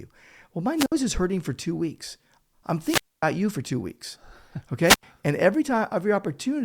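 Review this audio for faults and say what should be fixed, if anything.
Wireless microphone squelch dropout at 0.76–0.92 s, 2.79–3.25 s and 4.82–5.03 s. Each time the analogue FM link's signal fades, hiss swells, then the receiver's squelch cuts the output: about 59 ms of near silence before "is hurting for two", about 250 ms between "for two weeks I'm" and "you for two weeks", and about 86 ms before "and every". To prevent it, keep line of sight to the receiver, shorten the distance, and move to a cleaner frequency or use diversity reception.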